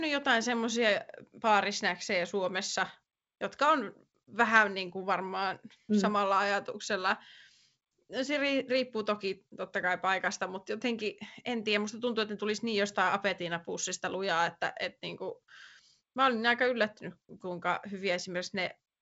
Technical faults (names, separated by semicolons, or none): none